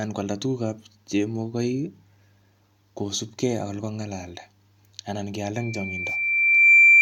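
From 5.55 s to the end at 7.01 s, a loudspeaker feedback squeal takes over the speech. A single tone at 2.4 kHz rises out of the sound and swells over roughly a second, ending up around 15 dB above the speech. The microphone is picking up the loudspeaker it drives, and at 2.4 kHz the gain around that loop is greater than one, so the tone keeps feeding itself and climbs until it levels off.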